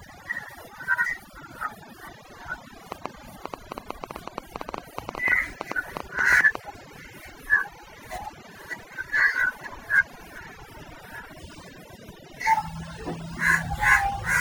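From the first second to the end, overdone noise removal is present. The reducer cuts any frequency band near its noise estimate. Quiet parts of the speech disappear with the noise. Pauses fall to near silence with twinkling specks.

From 2.92 to 6.56 s, a train of clicks cuts across the sound. They arrive about 8.3 times per second, unevenly spaced, around thirty in all. Each has much the same shape and stands well above the speech. They tick through pauses too. Interference from nearby equipment is the likely cause.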